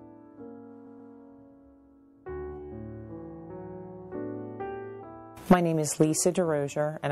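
The whole clip carries plainly audible damage, likely from MP3 compression at a low bitrate around 64 kbps. The encoder runs short of bits. It cuts the treble and drops weak detail frame by frame. The result sounds watery and swirly, with smeared attacks.

From 0.85 to 1.11 s there are repeated frames. A block of about 0.13 s plays twice more in a row. This is a stutter. It stretches the audio by about 0.26 s.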